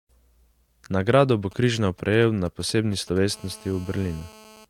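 From 1.51 to 3.18 s, GSM signalling bursts from a nearby phone are rectified into galloping dit-dit-dit ticks and brief 217 Hz buzzes, roughly 25 dB below the speech. From 3.33 to 4.65 s, a GSM phone buzz replaces those clusters with a continuous, raspy, harmonic-rich 217 Hz drone at about -25 dB, which fits a phone in an active call.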